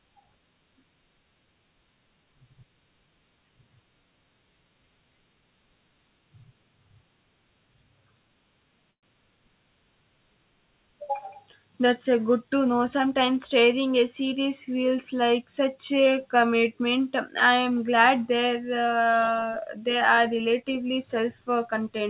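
Speech coming through a call path, with nothing above 4 kHz, which fits a 64 kbps G.711 mu-law link, and there are two glitches worth flagging. From 8.91 to 9.06 s there's a call audio freeze: the last bit of sound gets stretched into a short fading buzz that drops to near silence, then the speech picks up right where it left off. Nothing's lost, it's just a gap of roughly 120 ms pushed into the audio, most likely because packets stalled and the jitter buffer ran dry. Then from 19.61 to 20.91 s you get a jitter buffer speed-up. The receiver trims tiny pitch-period slices over and over to cut excess buffered delay, about a tenth of a second in total. So the speech runs about 7% fast at unchanged pitch and sounds a touch rushed.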